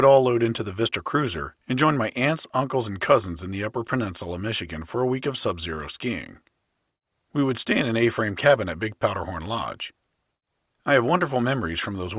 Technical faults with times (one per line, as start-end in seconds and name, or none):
none